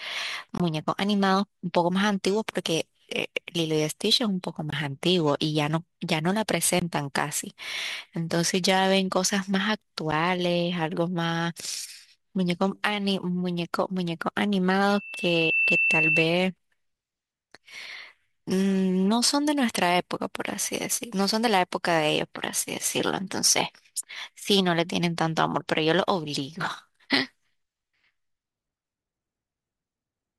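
Blocks of digital silence cut the speech at 0.58–0.60 s, 4.70–4.73 s, 6.80–6.82 s and 10.11 s. Each is a gap of 21 ms, or 11 ms at 10.11 s, consistent with 1024- and 512-sample buffers left unfilled in time. At 14.87–16.29 s a loudspeaker feedback squeal appears. The microphone hears its own loudspeaker, and a 2.7 kHz tone swells within a second to about 5 dB above the speech.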